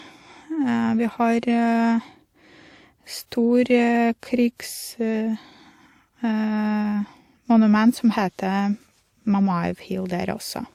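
From start to end the speech carries a layered coding texture: two kinds of artefact heard at once. The likely cause is transcoding between lossy codecs, which fits an Opus encode near 48 kbit/s followed by WMA 1 near 96 kbit/s, the second stage spending bits on the first stage's errors. A spectrogram would show patchy, blocky upper bands and a cut-off set by the narrower stage.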